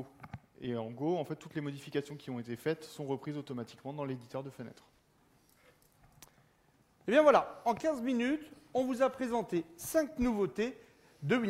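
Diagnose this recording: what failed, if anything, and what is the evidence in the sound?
Nothing failed; no fault can be heard anywhere.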